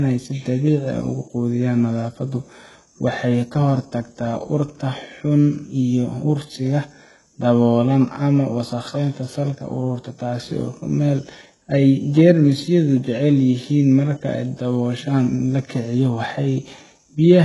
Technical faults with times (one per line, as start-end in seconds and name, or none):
0.00-17.45 HE-AAC compression